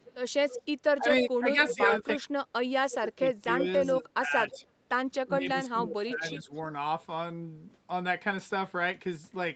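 From 0.0 to 0.62 s, then 1.16–1.69, 2.91–2.95, 4.49–4.67 and 6.05–6.59 s, an echo leak returns a faint copy of the speech about 0.31 s late. It is about 10 dB below the speech at first and about 20 dB below later on, likely from a loudspeaker echo the canceller missed. Unlike a room reflection, it arrives as a distinct delayed repeat.

From 0.99 to 2.32, 2.95 to 4.61 and 5.26 to 6.52 s, speech suppressed in double talk makes the talker's own voice dip by up to roughly 30 dB. This is likely the canceller ducking while both sides speak, and it is a loss of the talker rather than an added copy.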